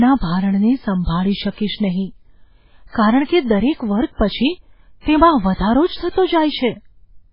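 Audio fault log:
throughout, MP3 compression: the speech has nothing above 5.2 kHz, so s sounds lose their hiss and the whole clip sounds dull and boxed in. The damage is heavy, with a watery, swirling texture as faint detail drops in and out from one moment to the next. The likely cause is a low-bitrate MP3 encoder, consistent with about 16 kbps, that cut the treble at a fixed frequency and discarded weaker frequency components frame by frame.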